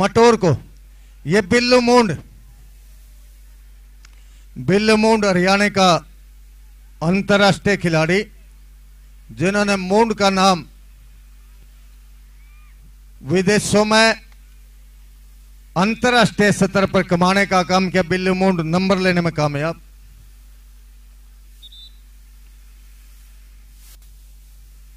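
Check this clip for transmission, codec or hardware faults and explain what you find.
No transmission, codec or hardware faults can be heard anywhere in the clip; the signal stays continuous and stable throughout.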